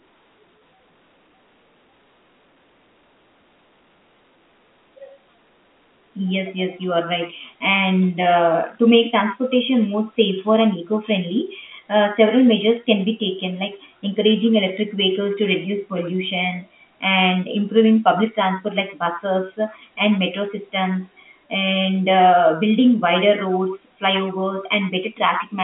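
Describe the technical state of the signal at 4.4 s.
At 4.4 s the signal is intact, with the speech carried cleanly through ordinary G.711 telephone coding, its band limited to the line's roughly 200 Hz to 3.5 kHz and nothing above about 3.7 kHz.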